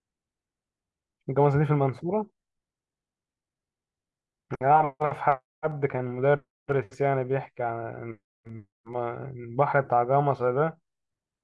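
Nothing in this speech recording stands out as a technical problem; there's no moment where anything goes wrong.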